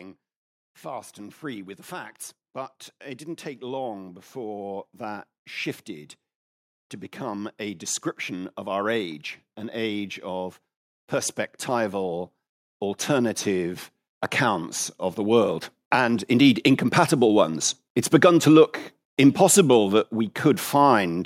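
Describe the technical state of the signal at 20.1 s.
At 20.1 s the speech signal is intact, with no audible technical fault at that moment.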